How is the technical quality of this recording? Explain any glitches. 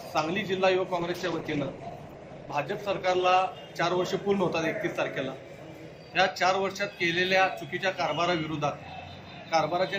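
One fault stands out: a call bitrate drop from 1.0 s to 3.61 s. The bandwidth estimate for the call fell, and the encoder was told to spend far fewer bits. The sound is consistent with a cut from roughly 128 kbps to about 15 kbps, held at its lowest for about 2.5 s. At that rate Opus quantizes coarsely and trims the high band, so the audio turns rough, watery and muffled until quality returns near 3.6 s.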